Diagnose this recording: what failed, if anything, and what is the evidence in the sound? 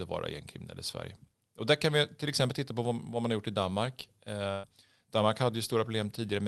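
At the network stage, a burst of packet loss runs from 4.51 to 4.66 s. For about 120 ms the sound does not move on. The last fragment is stretched and fades, heard as a held buzz on voiced sound or a decaying hiss otherwise. The speech then resumes further along, with roughly 120 ms of it never arriving. The receiver's loss concealment filled the gap by extending and attenuating what it last had. On either side, the call codec's top end stops near 12 kHz.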